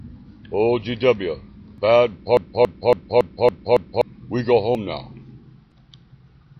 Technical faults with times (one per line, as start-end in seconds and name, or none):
2.37-4.01 broken-record loop